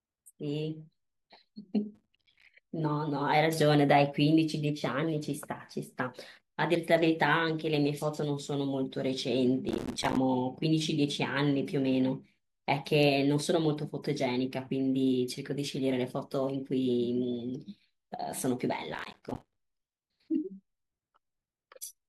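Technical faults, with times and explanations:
1.95–2.49 s, 9.69–10.17 s, 18.95–19.56 s: processor overload crackle. The processor repeatedly misses its deadlines for buffers of what sounds like about 5 ms, and each late buffer becomes a hard-edged gap of silence. Dozens of these dropouts in a row tear through the speech as a gritty crackle burst that stops once the load eases.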